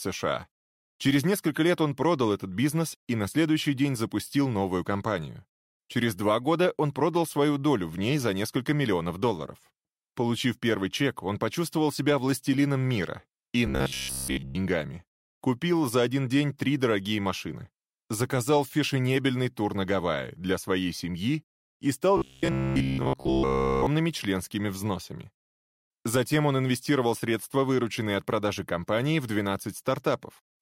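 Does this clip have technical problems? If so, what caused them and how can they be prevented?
Yes. From 13.67 to 14.55 s, and again from 22.17 to 23.87 s, the sound turns into a rigid, metallic buzz at 66.7 Hz. That fits robotic sound from repeated short buffers, likely a 15 ms chunk looped while incoming audio was late. In the first stretch most of the audio is replaced by repeats; in the second, all of it is. Larger jitter buffers or a more reliable delivery path would prevent it.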